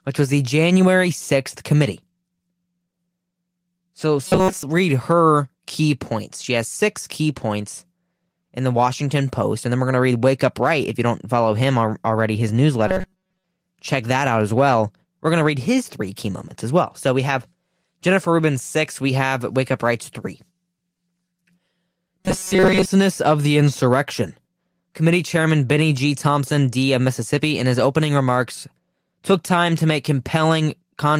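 Robotic sound from repeated short buffers occurs at 4.27–4.63 s (before "read her key points"), 12.88–13.44 s (between "follow him already his" and "check that out as") and 22.20–22.90 s (before "of the"). Each time, the speech collapses into a metallic buzz at 188 Hz, most likely because most of the audio was replaced by repeats of a chunk about 5.3 ms long.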